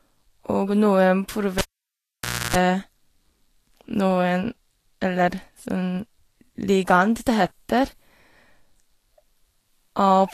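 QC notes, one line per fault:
Throughout: Vorbis compression, likely. The treble stops dead at 14.1 kHz, and below that edge you get hiss and a grainy texture where the codec quantised the fine detail so coarsely it turned into noise of about the same energy. Tones sound roughened and consonant attacks blurred. The damage is plainly audible, which fits a low bitrate somewhere around 34 kbps.
1.59 to 2.56 s: cable pulled and plugged in. There's a pop at 1.59 s as the live lead comes out, then the sound drops to near silence for roughly 0.93 s. About 0.3 s of 60 Hz mains buzz breaks through in that gap, the sort you get when only the plug tip is making contact and picking up hum. A second pop at 2.56 s marks the lead seating again and the audio coming back.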